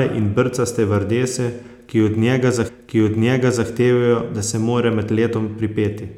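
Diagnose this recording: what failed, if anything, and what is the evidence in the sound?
The failure is at the streaming playback stage: the player fetched or queued the same segment twice, so a stream segment repeated. Just after "stevardese ki od njega", at 2.67 s, the speech jumps back and replays about 1.0 s of material, running to 3.67 s, with a small blip at the splice where the timeline snaps backward. The repeat adds roughly one second to the programme, and the content after it is delayed by that amount.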